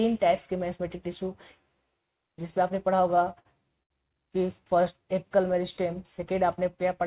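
Twice the sound briefly hangs on a held, slightly buzzy tone, from 3.40 to 3.47 s and from 3.83 to 3.92 s. Each is a short stall from a late packet: the jitter buffer ran dry, the receiver stretched the last sound for 51 ms and then 73 ms, and nothing was lost. The band stops at 4 kHz, which fits a G.711 call path.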